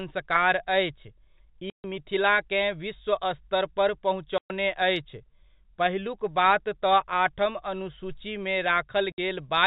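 Packet loss filled with silence chops the speech at 1.70–1.84 s, 4.38–4.50 s and 9.12–9.18 s. These are holes of 140, 120 and 60 ms, multiples that fit 20 ms packets, with hard edges. The waveform shows flat silent stretches, and the spectrogram shows blank columns edged by thin broadband lines.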